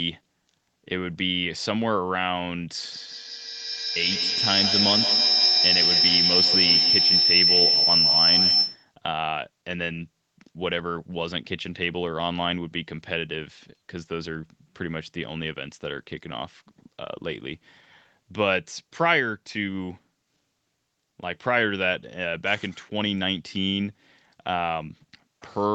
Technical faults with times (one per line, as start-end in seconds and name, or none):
2.92-8.93 feedback howl